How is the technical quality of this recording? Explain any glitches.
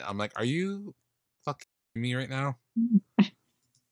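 The recording has one clear glitch, a digital wireless dropout, from 1.63 to 1.96 s. The wireless link lost too much of its data stream, so the receiver stopped trying to reconstruct the signal and muted its output, with only a very short fade at each edge. For about a third of a second the speech vanishes into a clean hole of near silence, with no hiss, crackle or burst of noise on either side, and the audio returns just before "me right now".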